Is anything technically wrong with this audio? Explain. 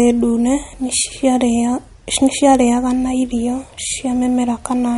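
Yes. Throughout the recording, a low-bitrate encoder has likely starved the signal of bits, which points to MP3 compression at around 48 kbps. With so few bits, it discards everything above about 11.2 kHz and zeroes the weaker frequency lines, which then flicker on and off between frames. The result is plainly audible: the speech sounds dull at the top, with a watery, swirling quality, metallic chirps on s sounds, and smeared consonant attacks.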